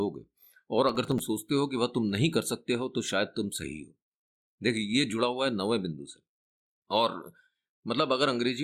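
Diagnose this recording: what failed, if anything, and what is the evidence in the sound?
A gritty burst of crackle tears across the speech from 0.89 to 1.19 s, then stops. This is processor overload crackle at the driver and buffer stage: several tiny buffers, about a millisecond and a half each, missed their deadlines and were filled with stale audio, leaving hard-edged splices.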